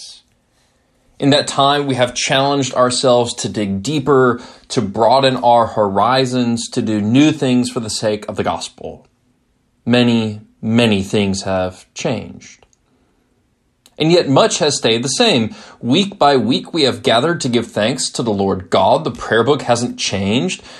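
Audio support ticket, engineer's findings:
No audible defects found on review; no action required.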